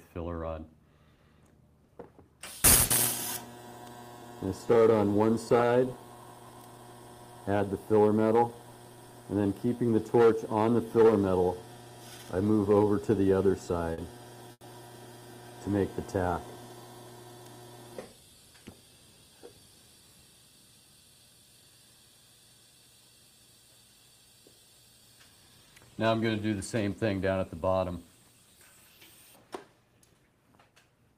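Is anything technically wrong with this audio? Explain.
Yes. Between 1.15 and 2.93 s, scattered short gaps: a few packets went missing and the receiver covered each by extending the preceding sound, leaving brief ticks or smears, the longest around 70 ms.

From 3.85 to 4.46 s, a jitter buffer slow-down: the receiver repeated tiny slices to rebuild its reserve, adding 44 ms, so the audio drags at 94% speed with unchanged pitch.

From 6.40 to 8.64 s, a jitter buffer speed-up: the receiver trimmed short slices to shed excess delay, about a tenth of a second in total, so the audio runs hurried at 105% speed with unchanged pitch.

Two short stalls from a late packet, at 13.93 to 14.01 s and 14.52 to 14.64 s: the buffer ran dry and the last sound was held for 50 ms and then 90 ms, giving a brief held buzz or dip before playback resumes with nothing lost.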